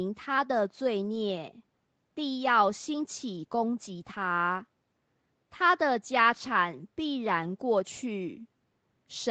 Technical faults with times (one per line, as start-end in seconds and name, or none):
none